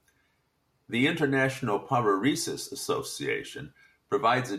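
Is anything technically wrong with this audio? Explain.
No, nothing technically wrong turns up anywhere in this speech recording.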